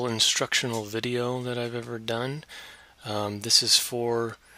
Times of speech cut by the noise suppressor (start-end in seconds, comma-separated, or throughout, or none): none